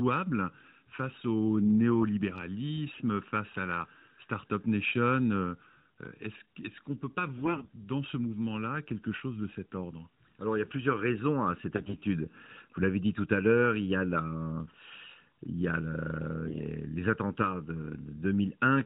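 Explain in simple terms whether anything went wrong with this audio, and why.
Two things went wrong here. The first runs through the whole clip: a channel delay (comb filtering). One side of the recording arrives under a millisecond late, and when both sides are mixed into one, they cancel each other at a regular series of pitches, starting around 700 Hz. That's why the speech sounds hollow and a bit phasey the entire time, like it's coming through a tube.

The second is AMR bit errors, in four short bursts where the phone link got shaky and some of the less-protected data arrived scrambled. The speech keeps roughly its pitch and loudness but turns hoarse and gargly for a moment: at 2.94 to 3.02 s, just before "face à la"; at 7.38 to 7.70 s, between "qu'on ne peut pas" and "dans ce"; at 11.76 to 11.98 s, right after "plusieurs raisons à cette"; and at 16.46 to 16.61 s. The mobile phone codec underneath is working normally, so you get the usual narrow, phone-call sound, with nothing above 4 kHz.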